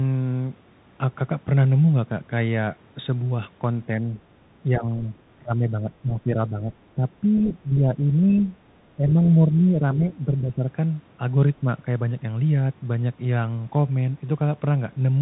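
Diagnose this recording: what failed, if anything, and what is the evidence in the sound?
Bluetooth CVSD headset codec damage runs through the whole speech clip, at the codec stage. The sound is band-limited to about 4 kHz, with a granular hiss under the speech, scratchy s sounds, and roughness on loud, bright passages where the one-bit-per-sample delta modulator cannot slew fast enough. That fits a 64 kbit/s CVSD link. The call's microphone high-pass, which removes only the deepest bass, is normal and not part of this fault.

Speech suppressed in double talk happens in the call-processing stage at 3.87–4.06, 4.63–5.06, 5.36–6.72, 6.96–7.05, 7.21–8.45, 8.96–10.05 and 10.25–10.7 s. The level dips by roughly 5 to 15 dB, deepest in the long stretch around 5.4–6.7 s. The likely cause is an echo canceller that could not separate the talker from loudspeaker echo while both sides spoke, so it attenuated everything.

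The other side's voice leaking through is a brief scrap at 8.30–8.43 s, near the end of one suppression stretch. It sits roughly 20 dB below the main speech. It is likely residual far-end audio from the loudspeaker that the echo canceller in the call processing did not fully remove from the microphone signal.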